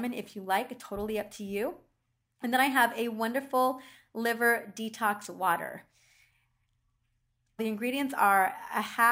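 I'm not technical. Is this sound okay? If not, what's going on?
No. There is a bright, metallic fizz riding on the speech from start to finish. This is imaging from sample-and-hold upsampling. The sound appears to have been stored at 24 kHz and then converted to 48 kHz by simply repeating each sample, with no smoothing. That leaves a mirrored copy of the speech between 12 kHz and 24 kHz. It gets louder when the speech does, and it moves the opposite way when the pitch changes.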